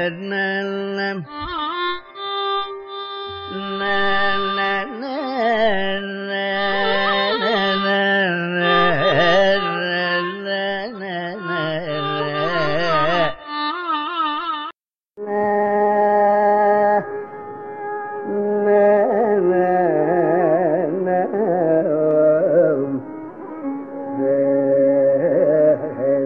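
No technical faults can be heard anywhere in this audio.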